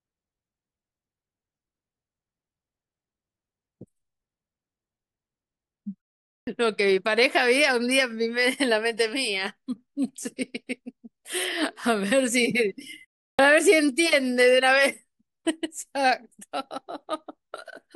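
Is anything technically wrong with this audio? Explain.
Yes. A clipped start after a pause occurs at 6.40 s and 13.32 s, after silences of 0.47 s and 0.35 s. The output device sleeps during each gap and wakes late. It loses 72 ms and 68 ms. Speech bursts in abruptly, missing its first sounds.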